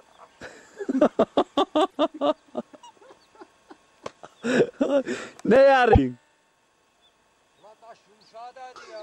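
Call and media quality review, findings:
Skip-ahead with a brief glitch at 1.90–1.96 s and 5.92–5.99 s, each about 70 ms. Likely a broken MP3 bit reservoir: frames dropped, later frames read borrowed bits from the wrong data. Waveform jump, then a disturbance spanning about three 26.1 ms frames.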